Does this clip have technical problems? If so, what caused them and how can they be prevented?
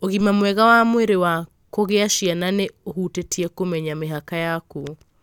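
No, nothing stood out as a technical problem on listening to this speech clip.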